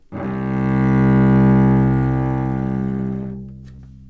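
Short concealed packet loss appears at 3.76 to 3.80 s. About 20 ms of the call audio arrived too late for the decoder, so the receiver extended the preceding sound to cover the gap and then blended back into the real signal. The result is a brief smear or wobble in the sound. Through the call path, nothing is present above 8 kHz, which fits a wideband codec such as G.722 at 64 kbps.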